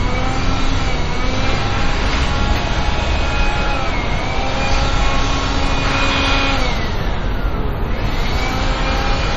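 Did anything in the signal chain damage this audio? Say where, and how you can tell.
Yes, damage was likely introduced at the codec stage by MP3 compression at a starved bitrate, roughly 40 kbps. Throughout the audio, nothing survives above 13.7 kHz, and weak spectral detail flickers in and out between frames, leaving a plainly audible watery, swirling texture and smeared transients.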